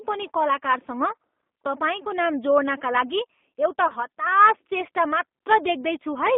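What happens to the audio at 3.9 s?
VoIP packet loss concealed by the speech codec, from 3.88 to 3.93 s. One packet, 20 ms of audio, never arrived, and the decoder filled the gap by repeating its last pitch period and filter shape at falling gain. The result is a brief, smeared buzzy tone or coloured noise that fades in place of the missing sound. Because each frame builds on the previous one, the voice stays weak or distorted for tens of milliseconds or more after packets resume.

This happens inside a G.729 codec stream (G.729A at 8 kbit/s) that runs the whole clip. The codec rebuilds speech from a vocal tract filter, a pitch predictor and a few pulses per frame, on a line limited to about 200 Hz to 3.6 kHz. Its plainly audible rough, synthetic texture surrounds the concealed gap.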